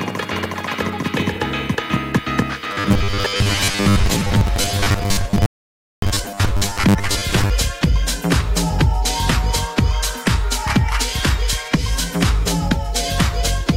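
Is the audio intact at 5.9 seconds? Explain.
No. At 5.9 seconds the sound is cut to silence by a rebuffering stall that runs from 5.46 to 6.02 s. The player exhausted its downloaded audio and paused until more arrived, adding about 0.57 s of dead air before resuming exactly where it left off. Unlike a dropout, nothing is skipped here; the gap is inserted time, and the sound on either side joins seamlessly once playback restarts.

That stall sits inside a longer stretch of robotic sound from repeated short buffers, from 2.64 to 7.50 s. The audio takes on a rigid, metallic buzz at 100 Hz, which fits a 10 ms chunk being replayed whenever new audio comes too late. The likely cause is audio arriving too seldom, with roughly half the material being repeats while the real sound is skipped. That makes it different from the stall, which loses nothing.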